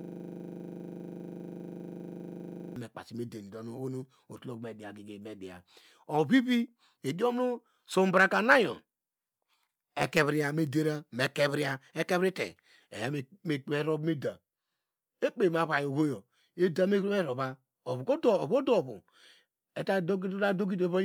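From the very start until 2.76 s, a system hang loop is already under way: the system froze while the audio hardware kept replaying one 40 ms slice of its buffer, producing a rigid 25 Hz buzz. The waveform shows an identical block repeating; the spectrogram shows harmonic lines spaced 25 Hz apart.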